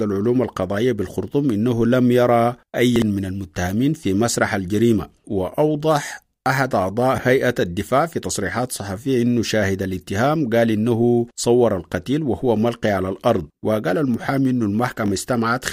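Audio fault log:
2.96–3.02 s and 15.06–15.10 s, chunks out of order: a 20 ms chunk of the speech plays late, after chunks meant to follow it. At 2.96 s it is two chunks late, and at 15.06 s one chunk late. No audio is lost, but the order is wrong. Each event leaves three hard joins, heard as a brief jumbled, garbled moment.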